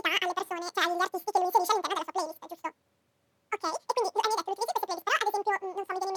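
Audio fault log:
Throughout, wrong sample rate: the speech runs at twice normal speed and sits a full octave (12 semitones) high, thin and hurried. Speed and pitch rise together, which fits audio recorded at about 22 kHz played back at 44.1 kHz without conversion.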